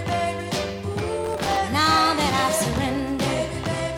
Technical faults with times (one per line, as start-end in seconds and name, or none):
1.25-1.57 processor overload crackle